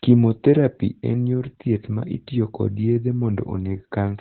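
Opus voice compression runs through the whole of this speech clip, with heavy damage. The coder is working in its SILK linear-prediction mode at narrowband, so nothing survives above about 4.2 kHz and the voice sounds muffled, like a telephone line. With so few bits, the excitation signal driving the predictor is coded coarsely, giving a hoarse, slightly robotic texture that fits a very low bitrate of around 8 kbps.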